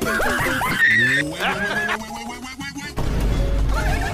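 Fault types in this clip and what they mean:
No technical faults can be heard in this clip. Nothing in the audio points to a problem in how it was captured, carried or played back.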